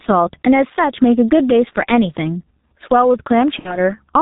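From the start, loud and soft parts sit closer in level and the sound is squashed, with a gain swing of around 10 dB. That's gain pumping, likely from gain set too high with a fast limiter clamping down. The whole clip also carries heavy G.723.1 codec damage: it sounds muffled and hoarse, with nothing above 4 kHz and smeared consonants, consistent with a roughly 6 kbit/s stream. At 3.59 to 3.79 s, VoIP packet loss concealed by the speech codec shows up. A gap that fits about two 30 ms frames gets papered over with a fading extrapolation, and the sound stays weak or distorted for a short while afterwards.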